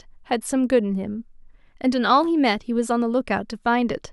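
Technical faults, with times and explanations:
Nothing technical stands out here; the speech comes across with no faults to note.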